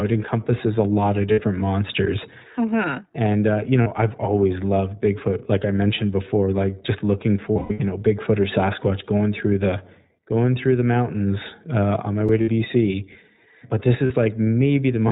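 The speech runs through the iLBC codec for its full length, and the damage is plainly audible. The band stops at 4 kHz, and the voice takes on the slightly rough, synthetic quality of a coder that models the excitation in short, self-contained frames. The character fits iLBC's 15.2 kbps mode with 20 ms frames.

Lost iLBC frames first appear at 1.32 s, just after "encompasses a lot of". A 60 ms gap is filled by the decoder repeating the last pitch cycle blended with noise, heard as a brief held, buzzy vowel. The next loss, at 3.82 s, lasts 40 ms and sits between "uh you" and "I've always loved". The heaviest damage follows "before like just looking": from 7.52 to 7.82 s, 240 ms of audio is lost in scattered pieces, the longest run roughly a tenth of a second. There the concealment stretches into a breathy, fading drone. Because each frame decodes independently, the voice recovers almost immediately after each gap.

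At 12.29 s a 5 ms block of digital silence cuts in. The signal drops straight to zero and back with no fade, so the hard edges produce a single tick. The pattern points to an output buffer that was not filled in time.

Lost iLBC frames return at 12.42 s for 60 ms and at 14.06 s for 40 ms. Each is heard as the same short, buzzy sustained fill.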